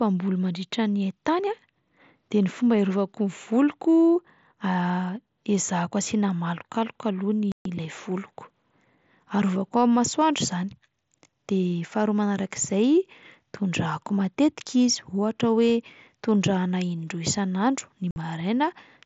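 At 7.52 s the speech drops out for about 135 ms, and again at 18.11 s for about 52 ms. That's unconcealed Bluetooth headset packet loss: dropped packets on the mSBC link leave hard-edged holes with nothing patched in.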